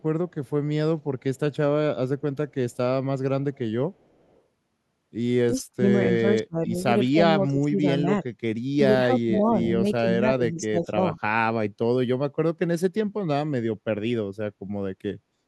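Right from the start there's a faint echo leak, trailing the speech by about 0.37 s, at 0.0–0.5, 1.01–1.56, 2.2–2.77, 3.54–3.58 (a touch louder) and 3.93–4.42 s. It's very quiet, far below the speech, likely a far-end speakerphone whose echo canceller didn't fully clear its microphone pickup. From 5.51 to 8.31 s the speech gets pulled down in patches, roughly a second and a half in all and dipping as far as about 30 dB. That's speech suppressed in double talk, likely the canceller ducking everything while both sides talk at once. Another brief echo scrap slips through at 5.93–5.98 s. A second suppression stretch runs 8.77–11.18 s, again about a second and a half affected, but shallower, dipping around 15 dB.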